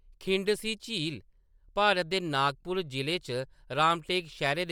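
Throughout, the speech has a plainly audible grainy, breathy edge with nothing above 20.2 kHz, likely Bluetooth LC3 compression, fitting 48 kbps in 10 ms frames.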